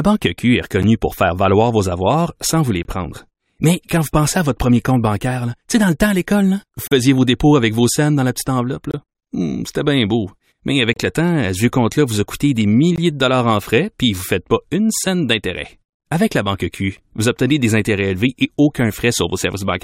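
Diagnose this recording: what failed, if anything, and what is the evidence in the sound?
Streaming playback is at fault: gaps between stream segments put hard-edged silences into the speech at 0.83 s (before "pour faire valoir vos"), 2.83 s, 6.87–6.92 s, 8.91–8.94 s, 10.93–10.96 s and 12.96 s. They fall on 2 s boundaries, which fits 2-second segments whose timestamps leave holes of 10 to 40 ms. Unlike dropouts, no audio is lost; the silence is inserted between segments.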